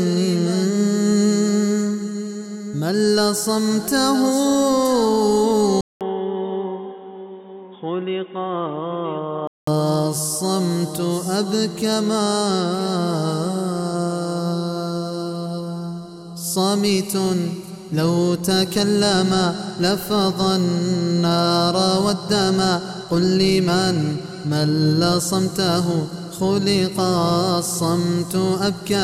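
A 29-second audio clip. From 5.81 s to 9.67 s the sound turns dull and slightly quieter, with nothing above 3.8 kHz, a 200 ms gap at the change and a new, faint noise floor. The input likely switched to a poorer device.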